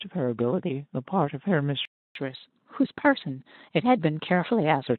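At 1.85 s the speech cuts out dead for about 300 ms, until 2.15 s. That's a playback stall, likely the player starving for data or its thread getting blocked, so the output just goes silent before picking up again mid-flow.

From 2.15 s to 4.87 s you get catch-up at higher speed: the player chews through its backlog at 1.1x by resampling, so the speech runs quicker and sits roughly a semitone and a half sharp before settling back to normal pace and pitch.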